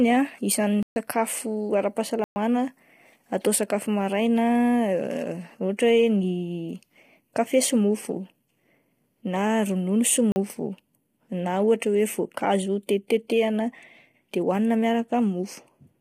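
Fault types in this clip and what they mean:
Low-delay AAC compression: speech sounds rough and grainy throughout, with noise between harmonics and nothing above 15.6 kHz, likely from AAC-ELD at a low bitrate near 24 kbps.
Block of digital silence: the audio drops abruptly to silence and back, at 0.83 s (133 ms), 2.24 s (120 ms), and 10.32 s (40 ms) after "na ronono sy".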